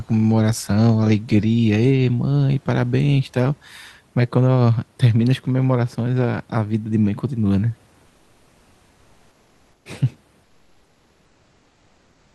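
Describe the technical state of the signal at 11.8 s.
At 11.8 s the sender has most likely stopped transmitting under Opus discontinuous transmission (DTX), so the receiver is generating comfort noise in place of the background from 10.45 s to 12.35 s. The genuine room noise, which sat about 38 dB below the speech, is replaced by a steady, featureless synthetic hiss, about 2 dB quieter and stripped of its natural detail, and it holds unchanged for about 1.9 s.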